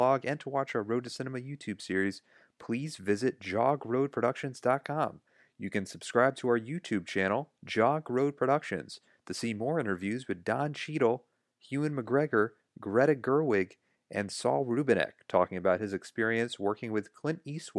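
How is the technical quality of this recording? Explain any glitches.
Listening through the speech recording, nothing stood out as a technical problem, so there are no glitches to explain.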